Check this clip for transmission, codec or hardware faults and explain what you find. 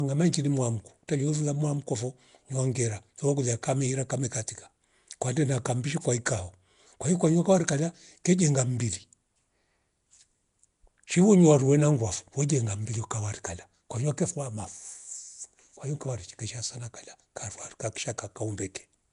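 There's one fault, and it runs through the whole recording. Nellymoser compression is the likely cause. The speech has a rough, hissy halo and a smeared, underwater quality, and nothing is left above 10.6 kHz. That fits Flash's Nellymoser Asao codec at roughly 44 kbps, coding short blocks with a fixed bit budget and filling starved weak bands with noise.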